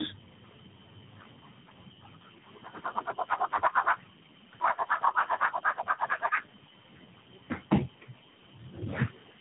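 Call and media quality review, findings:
Tandem speech coding throughout. Rough, muffled, warbly speech, nothing above 3.8 kHz. Sounds like about three successive speech codecs, each re-encoding the previous coder's degraded output.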